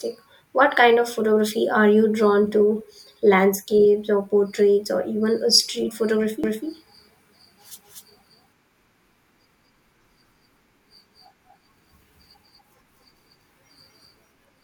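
A second, slower capture path was likely mixed in with the main one, creating a doubled audio track from 6.44 s, just after "or even a street", to the end. A dry copy of the speech, about as loud as the original, starts abruptly and trails roughly a fifth of a second behind.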